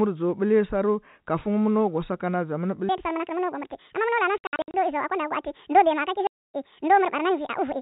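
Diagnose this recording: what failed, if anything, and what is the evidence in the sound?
Playback stage: from 2.89 s to the end, the speech runs 1.84 times fast and about ten semitones high, likely a section at the wrong speed from a clock mismatch.

Network stage: packet loss filled with silence leaves hard-edged gaps, about 240 ms scattered across 4.38 to 4.74 s and 270 ms within 6.27 to 6.53 s, consistent with 30 ms packets.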